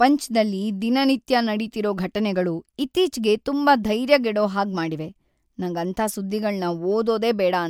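No technical faults can be heard anywhere in this recording.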